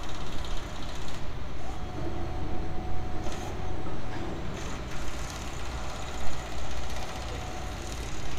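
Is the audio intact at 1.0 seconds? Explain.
Yes, the sound at 1.0 seconds is intact, with no dropout, click, distortion or other fault at that moment.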